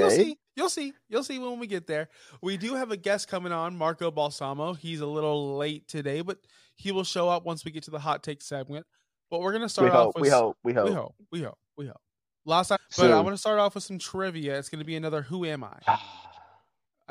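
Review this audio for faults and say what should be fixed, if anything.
At 12.75 to 12.77 s there's a short blip and the speech jumps ahead. That's likely a stream segment skipped: one chunk of the segmented stream didn't load and the player carried straight on with the next. Having the player retry or buffer a failed segment before moving on would stop this.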